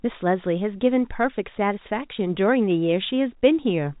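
There are no technical faults to describe in this speech, which comes through the telephone path as expected.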